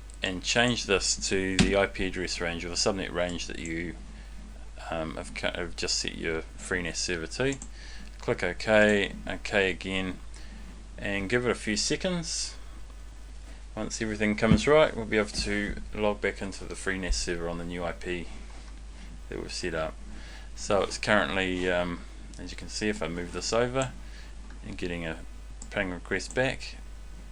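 Computer activity noise runs throughout the clip: a faint buzzing chirp pulsing at around 300 Hz, roughly 35 dB below the sound. It arises as changing processor or peripheral load shifts the shared ground of the audio circuit, so it follows the computer's activity, not the audio.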